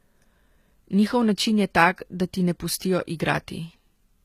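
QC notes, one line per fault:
Throughout: HE-AAC compression. The whole recording carries a plainly audible coded texture, with the top end brick-walled so nothing sits above about 14.9 kHz. The treble is still present but sounds synthetic: s sounds come across gritty and lispy, with a metallic sheen. That's the likely result of the encoder keeping only the lower spectrum and faking the highs by copying lower bands upward under a rough envelope, so the harmonics don't line up. The heaviness fits a bitrate around 20 kbps.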